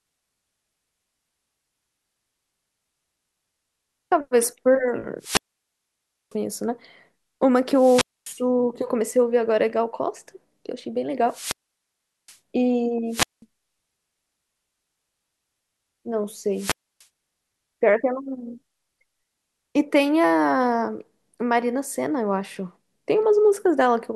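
Wireless microphone squelch dropout breaks this speech clip five times: 5.19–6.36 s, 7.71–8.42 s, 11.27–12.38 s, 13.09–13.42 s and 16.53–17.06 s. Each time, the analogue FM radio link weakens, static swells, and the receiver's squelch mutes the output. The resulting silent holes last about 0.95 s, 0.25 s, 0.77 s, 0.19 s and 0.29 s before the signal recovers and the voice returns.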